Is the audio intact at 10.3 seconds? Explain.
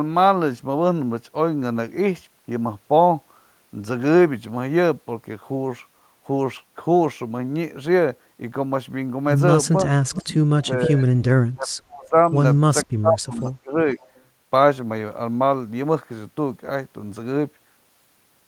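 No. An echo leak runs from 10.11 to 10.33 s. A faint, delayed copy of the speech comes back about 0.47 s late, sitting around 10 dB below the main speech. The likely cause is a loudspeaker on the far end whose echo canceller let part of its microphone pickup through. That residue was sent back down the line, so the speech briefly overlaps a trailing copy of itself.

Straight after, from 10.32 to 11.2 s, the speech is suppressed in double talk. The speech dips, with the deepest dip around 35 dB and roughly 0.7 s affected in total. Both sides are talking at once here. The likely cause is the echo canceller failing to tell the local talker from the returning echo. It turns everything down, so the speech dips under the overlap.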